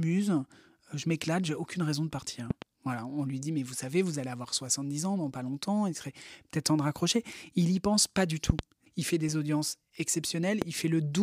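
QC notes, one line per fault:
2.51–2.64 s, 8.50–8.62 s, 10.62–10.64 s: loud pop. Double pops, then a single one, up to about 20 dB above the speech. Likely a sudden voltage pulse in the signal path.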